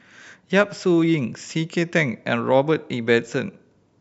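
No technical faults can be heard anywhere in this speech recording. There is nothing to mark at any point in the timeline.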